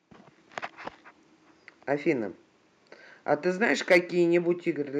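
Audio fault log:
3.75 s, microphone volume stepped down: the speech and its background drop together by about 1 dB in one abrupt step rather than a gradual fade. The likely cause is call software lowering the device's input gain after judging the level too hot.
3.91–3.98 s, microphone overload: a short burst of harsh, crackly edge sits on the loudest peaks, which push about 2 dB past the converter's limit, so a small share of samples are flattened. The likely cause is input volume still set too high for the converter.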